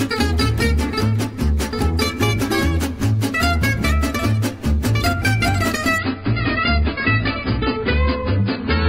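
From 5.98 s to the end, the sound abruptly turns dull, with nothing above 5.1 kHz and rising codec artefacts, yet no gap. This is an adaptive stream at a lower bitrate, a sudden switch that fits a drop from 96 to 16 kbit/s AAC.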